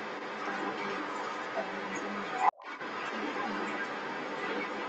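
From the start to the end of the clip, the other side's voice is leaking through, likely because the echo canceller left loudspeaker pickup in the microphone. It sits roughly 10 dB above the talker, and a spectrogram shows a second, overlapping harmonic pattern throughout.

From 2.52 to 2.64 s, speech is suppressed in double talk, likely from the canceller turning everything down while both sides spoke. The level dips by roughly 25 dB for about a tenth of a second, visible as a brief notch in the waveform envelope.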